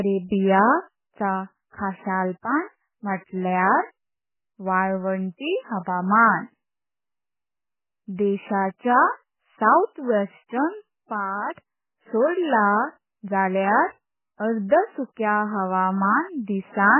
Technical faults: MP3 compression

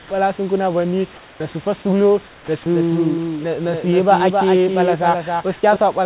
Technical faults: comfort noise in place of the background; onset clipped by the voice detector; doubled audio track

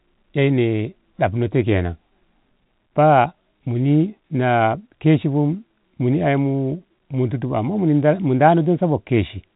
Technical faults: none

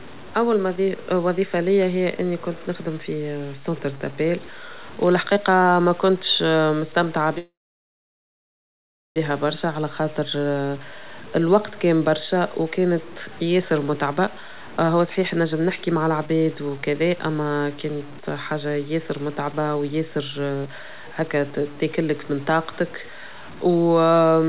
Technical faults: low bit depth without dither; call audio freeze; jitter buffer speed-up

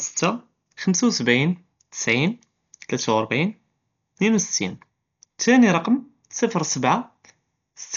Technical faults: Dolby Digital compression

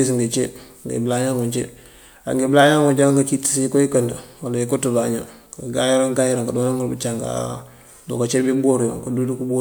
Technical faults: none

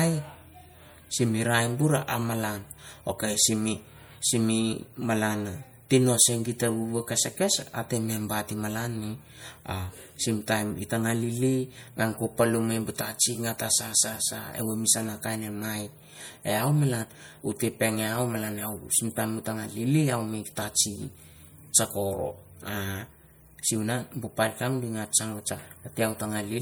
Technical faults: MP3 compression

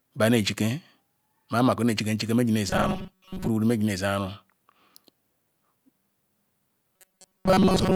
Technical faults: robotic sound from repeated short buffers

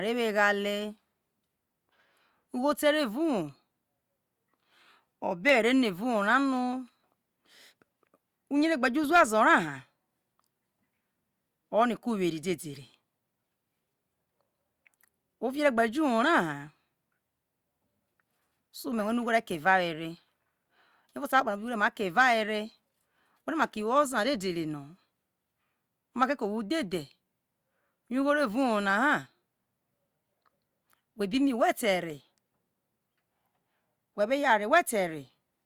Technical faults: none

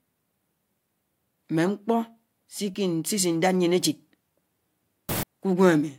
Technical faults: samples built from the wrong bytes

